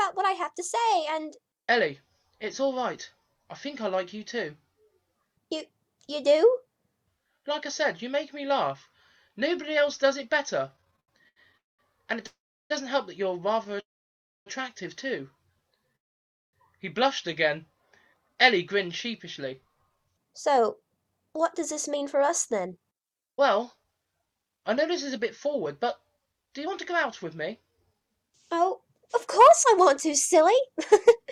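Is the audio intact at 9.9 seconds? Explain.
Yes, the audio is intact at 9.9 seconds, with nothing there to disturb it.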